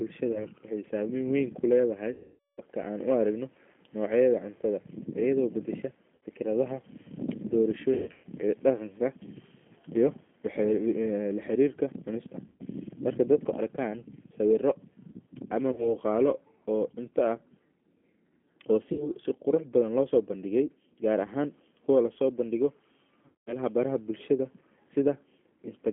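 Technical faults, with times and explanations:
Throughout, G.729 codec: the speech is confined to a telephone band of 200 Hz to 3.4 kHz and rebuilt at 8 kbit/s from a vocal tract filter, a pitch predictor and a few pulses per frame. The result is intelligible but plainly rough and synthetic. A simple band-limited line would sound muffled but natural. Here the grain comes from the model-based reconstruction, not the filtering.
0.32–0.47, 2.13–2.61, 6.16–6.22, 7.94–8.26, 12.48–12.63, 15.72–15.93, 18.93–19.09 and 23.26–23.57 s, VoIP packet loss concealed by the speech codec: audio went missing for 30 ms to 450 ms at a time. The longest gap follows "weyn kuledahay" at 2.13 s and lasts 450 ms. At 7.94 s about 240 ms is lost in scattered pieces over 300 ms, the longest run 120 ms. Another gap falls between "laharirka cunista" and "marka dadku". In each gap the decoder stretches its last pitch and filter into a fading buzzy tone or coloured noise rather than leaving silence or a click. 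That is what separates this from a plain dropout. The voice also stays weak and smeared for a short while after the audio returns, because each frame builds on the damaged one before it.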